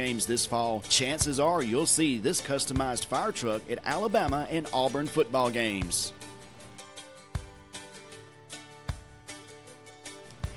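Ticks at a steady 20 Hz run through the whole sound: resampler restarted on every block, likely a 24 kHz to 48 kHz conversion in 50 ms blocks, showing as evenly spaced vertical spectrogram lines and waveform discontinuities.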